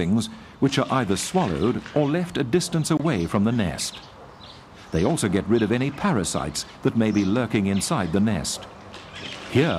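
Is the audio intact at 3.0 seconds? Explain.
No. Separately encoded pieces were joined without trimming encoder delay and padding, leaving a gap at the join from 2.97 to 3.00 s: a 24 ms gap whose edges the codec smears, so the silent part is shorter than that, before the sound resumes.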